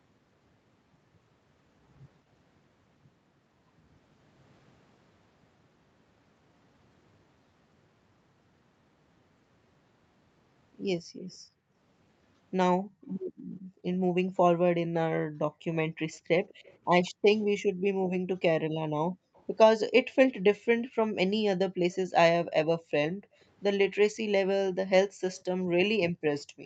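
From 11.01 to 19.34 s the echo canceller, reacting to far-end playback, repeatedly pulled the microphone level down. This is background gated by the echo canceller. The room tone dips by as much as about 40 dB, adding up to roughly two seconds of near-silence scattered across that span. The same gating returns at 23.14 s and lasts to the end of the clip, so the background keeps collapsing and recovering.

Inside and around those stretches, faint delayed copies of the speech come through, likely residual loudspeaker pickup that the canceller failed to remove. This is echo leak, arriving about 200 ms behind the original. It appears as brief scraps at 13.09–13.13 s (about 40 dB down), 19.34–19.43 s and 21.91–21.96 s. Longer stretches come at 15.73–17.41 s (about 30 dB down) and 25.29–26.43 s, where it is loudest, at about 20 dB below the speech.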